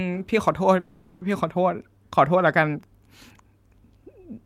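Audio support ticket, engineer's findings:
Call audio freeze, 0.79 to 1.23 s, speech clip. Last sound held and smeared into a fading buzz for about 420 ms, no dead silence. Likely cause: late packets draining the receiver's jitter buffer, with concealment extending the final frame. Resumes where it stopped, nothing lost, playout now about 420 ms behind. Spectrogram: frozen, blurred harmonic band decaying across the gap. Waveform: smooth tapering envelope, no flat zero segment.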